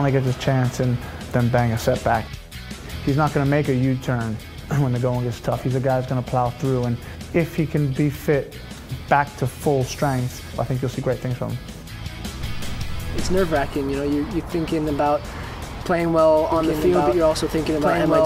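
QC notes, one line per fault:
16.52 s to end: doubled audio track; an equal-level copy enters abruptly about 2 s late, likely from a slower capture path. The spectrogram shows offset duplicate patterns.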